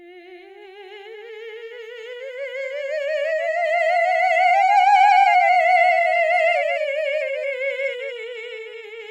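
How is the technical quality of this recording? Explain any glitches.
The music is marred by a doubled audio track throughout: a second full-band copy trails about a fifth of a second behind, some 5 dB quieter. It is likely captured twice or misaligned in editing. Unlike room echo, the copy has no decay or reverberant colour.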